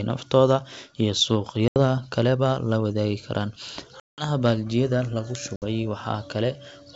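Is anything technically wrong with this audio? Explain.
Yes. Packet loss on an ADPCM call causes three silent gaps: at 1.68–1.79 s, just before "kaleba la wadaagi karaan"; at 4.00–4.29 s, between that phrase and "baaldiyada lagu"; and at 5.56–5.62 s, right after "baaldiyada lagu". Dropped packets were filled with silence, about 80, 180 and 60 ms long, the longest fitting roughly ten packets. Because the decoder's predictor and step size then disagreed with the sender's, speech comes back from each hard-edged hole slightly distorted before settling.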